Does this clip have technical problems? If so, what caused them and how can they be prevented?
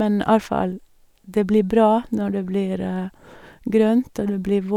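No, no technical faults are audible.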